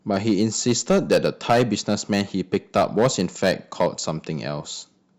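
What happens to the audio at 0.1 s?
At 0.1 s the speech is already hard clipped, and the fault runs unchanged through the whole recording. The signal was pushed about 10 dB past what a stage in the chain could pass, so its peaks are sliced flat, affecting a small share of samples, around 2 percent. Those square corners add harmonics high up the spectrum, heard as crackle and grit on louder syllables. Unlike soft saturation, the distortion arrives abruptly rather than as a gradual, rounded warmth.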